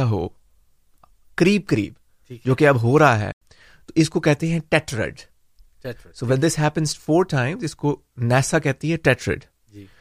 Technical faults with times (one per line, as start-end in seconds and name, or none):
3.32-3.41 corrupt frame muted
7.59 corrupt FLAC frame